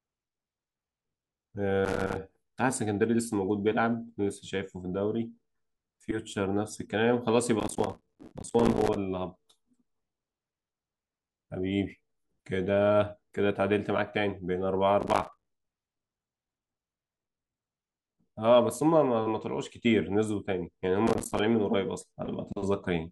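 The processor repeatedly fell behind, missing deadline after deadline on tiny audio buffers, which fits blocks of around 5 ms. Each miss leaves a hard-edged gap of silence in the speech, heard as processor overload crackle at 1.85–2.17 s, 7.60–8.96 s, 15.01–15.46 s and 21.07–21.39 s.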